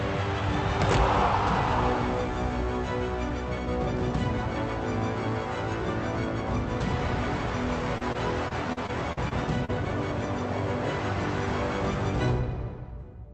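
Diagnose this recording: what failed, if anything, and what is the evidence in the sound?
The failure is on the network side: repeated packet loss (robotic sound) between 7.98 and 9.70 s. Over that stretch the audio turns choppy, with eight short holes, the longest about 42 ms, adding up to roughly 220 ms missing. The jitter buffer papered over each gap by stretching the last received sound, so about 13% of the span is synthetic fill. The top end stops near 8 kHz, which fits an Opus call path.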